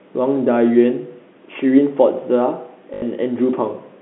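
Speech over a telephone-band line between about 200 Hz and 3.5 kHz, with G.711 coding, has one fault: packet loss with the last packet repeated from 2.94 to 3.02 s. About 80 ms went missing, which fits four 20 ms packets, and the receiver replayed the previous packet to fill it. The result is a brief robotic stutter buzzing near 50 Hz. A waveform would show four identical repeated segments with abrupt joins.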